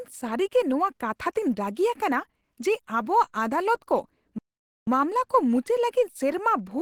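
It's a speech clip, and the whole thing carries plainly audible codec damage: the voice sounds hoarse, rough and grainy, which points to Opus compression at a low rate, likely around 16 kbps in its hybrid speech mode, where the encoder fills in detail rather than keeping it clean. Then from 4.38 to 4.87 s the sound cuts out mid-flow for about half a second before carrying on. That's a playback stall, likely the player running dry of data or its thread getting blocked until it recovered.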